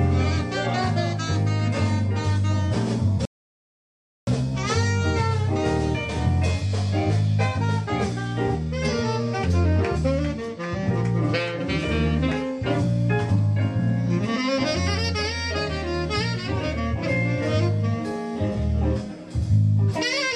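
A rebuffering stall runs from 3.25 s to 4.27 s. The player's supply of downloaded audio ran dry, so playback halted and waited for more data to arrive before carrying on. The sound drops abruptly into silence for just over a second, about 1.02 s, then picks up at exactly the point where it broke off. No material is skipped or repeated. The pause simply inserts dead time into the clip.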